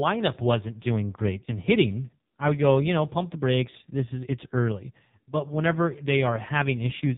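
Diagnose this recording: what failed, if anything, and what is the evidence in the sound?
At the codec stage, the whole recording passed through the AMR narrowband mobile codec. A spectrogram shows a hard ceiling at 4 kHz with nothing above it. The voice sounds buzzy and synthetic throughout, which points to heavy damage from a low mode around 5.9 kbps.

At the network stage, lost AMR speech frames affect one 20 ms frame at 2.3 s, between "doing great in hitting" and "I would go you". The decoder repeated the last pitch and vocal-tract settings at reduced gain. This gives a brief dip on the waveform and one frame of smeared harmonics on the spectrogram.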